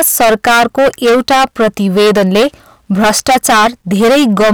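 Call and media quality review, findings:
Hard clipping throughout. Gain stage feeding converter or fixed-point stage overdriven by about 17 dB; nearly a third of samples clipped at the converter's limit, peaks cut flat. Flat tops add high harmonics: harsh fuzz on every loud speech segment.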